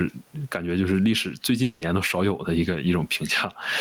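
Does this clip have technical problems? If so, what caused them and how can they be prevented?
Yes. Gain pumping runs through the whole clip, with the level swinging by roughly 10 dB. This is likely caused by the input gain being set far too high, with a fast limiter or compressor clamping down on every loud syllable and then letting go. The effect squeezes loud and quiet passages together, and the room noise sits about 44 dB below the speech. Setting the microphone gain lower and using gentler, slower compression prevents it.

A long network dropout occurs from 1.63 to 1.83 s, a gap of about 0.2 s. Over almost all of it, around 180 ms, a fading buzz or hiss continuing the preceding sound stands in for the missing audio, with no stretch of outright silence, and the speech then resumes past the lost section. The likely cause is a run of packets that never reached the receiver, whose concealment filled the hole. 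A steadier connection, or a larger jitter buffer with forward error correction, would prevent this.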